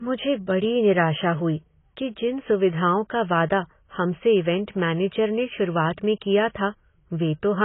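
Throughout the speech, nothing reaches above about 3.8 kHz, and heavy codec damage smears the sound, likely from AAC compression at a very low rate, around 16 kbps. Unlike a clean low-pass filter, the loss comes with quantisation artefacts rather than simple dullness.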